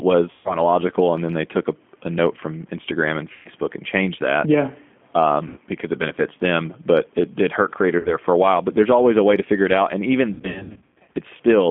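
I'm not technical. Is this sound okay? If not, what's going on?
No. The whole recording has passed through the G.729 codec, a compact phone-call format. It keeps only the middle of the voice, roughly 200 Hz to 3.4 kHz, and rebuilds the speech in a simplified way, so it sounds thin, muffled and slightly robotic.

There is also VoIP packet loss concealed by the speech codec. Pieces of the call went missing, and the decoder patched each gap by stretching the last sound it had, which then fades out. You hear buzzy or smeared dropouts at 0.31–0.57 s, 3.33–3.49 s, 5.48–5.59 s and 7.99–8.16 s. From 10.34 to 11.15 s there is a longer stretch of repeated small dropouts. The voice stays weak for a moment after each gap.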